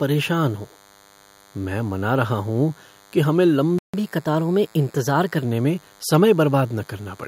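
DECT cordless phone buzz runs throughout: a nearby handset's 100 Hz radio bursts are rectified into the audio, leaving a faint, thin, harmonic-rich buzz roughly 35 dB below the speech. A playback stall from 3.79 to 3.94 s, just after "कि हमें", silences the speech for 150 ms, likely because the player ran out of buffered data. Catch-up at higher speed follows from 3.94 to 5.44 s: the backlog plays at 1.1x, raising the pitch about a semitone and a half.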